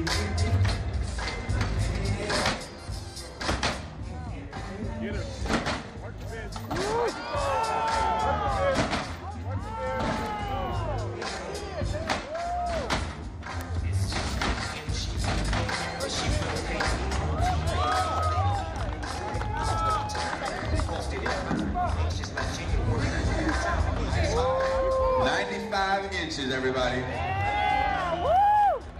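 You'll catch two isolated ticks in this audio, at 10.26 s and 13.61 s, and both are classic bit error spikes. Each one is a single flipped bit, in memory or on a digital link, that throws a sample value off by a power of two before it snaps straight back. The first peaks at about -24 dBFS and is short enough to suggest a couple of corrupted samples. The second is louder, around -12 dBFS, and sounds like just one. Both are bright, full-band clicks with no connection to the surrounding sound.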